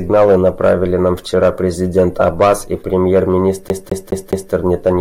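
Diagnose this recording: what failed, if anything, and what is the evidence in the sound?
Playback failed: the CD is stuck on one turn. From 3.69 to 4.53 s, a 0.21 s slice of speech repeats four times. A scratch keeps throwing the laser back one track.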